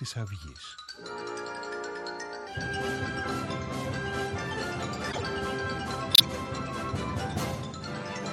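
Low-bitrate encoding has likely squeezed the whole recording through an MP3 encoder with too few bits, at a level consistent with around 64 kbps. To save data the encoder has cut off the top of the spectrum and dropped quiet frequency lines, which keep appearing and disappearing from one frame to the next. This MP3 compression damage is plainly audible throughout: the audio sounds dull and watery with a swirling texture, and sharp onsets come out smeared rather than crisp.

At 5.09 to 5.22 s a corrupt frame was decoded. Bits inside a short run of compressed frames were flipped, roughly five of them going by the length, and the decoder played them regardless. Misread gains and codes placed energy at the wrong frequencies, so the passage turns into a brief chirpy burst of noise that peaks at about -20 dBFS and lasts for the span of the damaged frames.

At 6.13 to 6.25 s a corrupt frame was muted. 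This time the decoder rejected the damaged frames, a gap that fits about four frames, and the player substituted silence. The result is a hole of roughly 0.12 s that cuts in abruptly and ends just as suddenly. The timing on either side of the gap stays intact, so the audio resumes exactly where it should.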